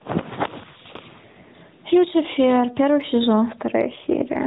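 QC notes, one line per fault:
Throughout: gain pumping. The level swings by roughly 15 dB, so loud and quiet passages sit unnaturally close together and the speech sounds squashed. This is likely a front end with its gain set too high, leaving a fast compressor or limiter to haul the level down every time the speech pushes up, then release it again in the gaps.
3.90 to 4.46 s: AMR rate drop. In the final half second the speech turns rougher and more synthetic, with a buzzier, less natural texture than the rest of the clip, yet with no gap and no change in bandwidth. The coder has stepped down from 12.2 kbps to 5.9 kbps, as happens when a weak radio link leads the network to trade speech bits for error protection, and the coarser excitation model is what gives the artificial edge.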